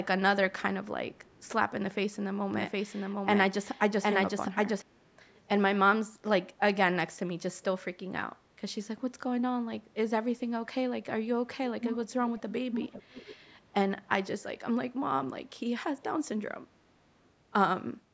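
Right at 1.15 to 1.49 s and again at 5.29 to 5.4 s there's a very faint delayed copy of the speech, about 445 ms behind. That's an echo leak, likely a far-end speakerphone whose echo canceller let some of its own pickup slip back down the line.

In between, from 2.54 to 4.82 s, you get a doubled audio track: a full-band copy trailing by roughly 700 ms at about the same level, with no room colour, cutting in and out abruptly. It's likely a second, slower capture path mixed in alongside the first.

The echo leak comes back much stronger at 11.81 to 12.03, 12.37 to 12.54 and 12.72 to 13.53 s, now 494 ms late and close to speech level in places.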